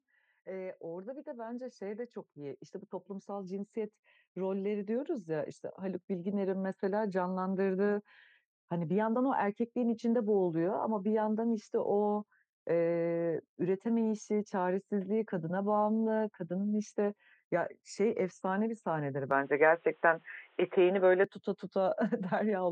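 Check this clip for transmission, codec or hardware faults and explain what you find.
Two faults in this speech. From 0.43 to 7.11 s there's automatic gain rising: the gain control judged the input too quiet and lifted it about 12 dB, so voice and background swell together. Then from 19.31 to 21.24 s the sound abruptly goes boxy, with nothing above 3.8 kHz, a shift of roughly 5 dB in level and a faint new noise floor, with no gap at the change. That's likely the input switched to a poorer device, a narrower-band mic with its own character.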